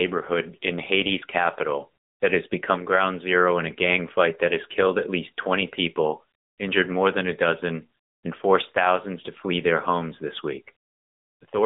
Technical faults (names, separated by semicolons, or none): AMR narrowband mobile codec